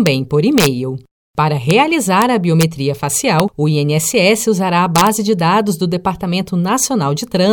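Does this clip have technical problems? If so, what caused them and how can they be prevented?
Yes, there is integer overflow on loud speech peaks at 0.07, 0.58–0.67, 1.71, 2.22, 2.61–2.63, 3.40 and 4.96–5.07 s (after "usará a", before "de dados do"). The worst is about 4 dB over at 0.58 s. Peaks past full scale wrap to the opposite sign, producing sharp cracks. The waveform shows sudden full-range sign flips, and the spectrogram shows broadband vertical streaks. Use saturating arithmetic or leave headroom before gain stages.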